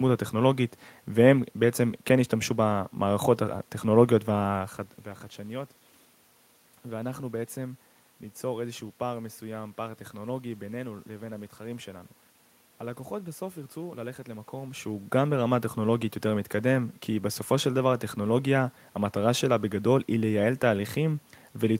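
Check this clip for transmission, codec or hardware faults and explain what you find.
Nothing here points to a transmission, codec or hardware problem; the background noise belongs to the room itself, and the level shifts around 4.5 and 14.5 seconds are just the talker moving relative to the microphone.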